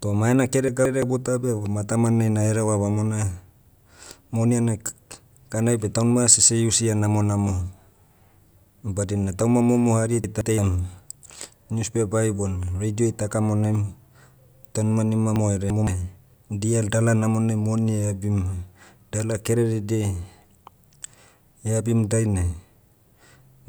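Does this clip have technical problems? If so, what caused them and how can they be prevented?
Yes. Chunks out of order: a block of roughly 171 ms was delivered late and played after the block meant to follow it, at 0.68–1.02 s and 10.24–10.58 s. At 15.36–15.87 s the late block seems to land two blocks behind. Each spot sounds briefly jumbled. Reordering buffered audio by sequence number or timestamp before playback or writing would prevent this.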